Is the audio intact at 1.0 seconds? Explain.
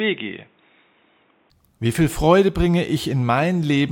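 No. At 1.0 seconds the speech sounds dull and boxy, with nothing above about 3.8 kHz, a level roughly 5 dB lower, and a faint background noise about 40 dB below the voice. This lasts from 0.0 to 1.5 s, and the fuller sound returns without any gap. The likely cause is the input switched to a poorer device, such as another microphone or a headset's call profile, whose narrower band, tone, level and noise floor replace the usual input's.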